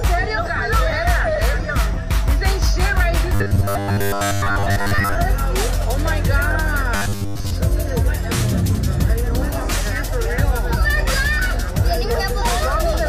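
At 3.35–5.16 s and 6.96–7.53 s, robotic sound from repeated short buffers, likely from looping a 10 ms segment, adds a metallic 100 Hz buzz that shows as rigid harmonic stripes on a spectrogram.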